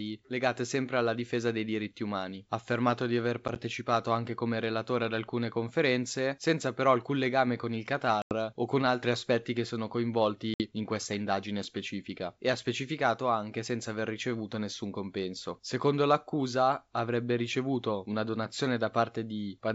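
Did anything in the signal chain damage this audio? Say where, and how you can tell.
Yes: packet loss on an ADPCM call, at the network stage. Hard-edged silent holes fall at 3.48–3.58 s after "affermato di aver" (about 20 ms lost in gaps of up to 10 ms across 80 ms), at 8.22–8.35 s after "alcun legame con il" (90 ms), and at 10.54–10.62 s before "in questa indagine specifica" (60 ms). The lost packets became silence, and the decoder's adaptive predictor and step size lost track of the sender's.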